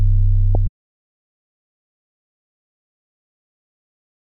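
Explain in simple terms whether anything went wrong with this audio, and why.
Two things went wrong. The whole clip sounds dull and plainly gurgly, with a grainy roughness on top. That points to MP2 compression, likely the cause. This older digital format splits the sound into many narrow slices by pitch. It then shares a limited budget of data among them. Here the budget was too tight. The highest slices get switched off, which takes away the brightness. The slices that remain are stored roughly, which gives the grainy texture.

At about 0.55 s there is a brief burst of DAB burbling. It sounds like a few watery blips. This happens when a digital radio signal is weak. Only a very small share of the data arrived wrong, but some errors slipped past the receiver's repairs. Single slices of sound then picked up short blips of noise, which is what you hear there.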